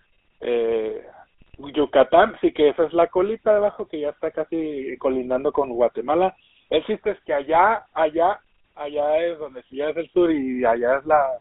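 Speech heard through the GSM full-rate codec for its whole length, with the band limited to roughly 300 Hz to 3.5 kHz and a plainly audible buzzy, gravelly roughness from the pulse-driven vocal-tract model, which fits a 13 kbps full-rate link. GSM bit errors break through twice, from 1.40 to 1.55 s and from 7.54 to 7.61 s. Corrupted filter, pitch or gain values distort the spectrum and level frame by frame, producing brief squawks and gargling.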